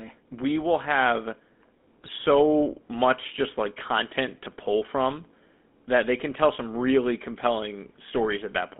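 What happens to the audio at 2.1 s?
From 2.02 to 2.09 s, GSM bit errors corrupt the decoder's filter, pitch and gain values, so the audio breaks into a brief squawk and gargle lasting roughly three 20 ms frames. Throughout, the GSM full-rate codec adds a buzzy, gravelly roughness and limits the band to about 200 Hz to 3.5 kHz, consistent with a 13 kbps stream.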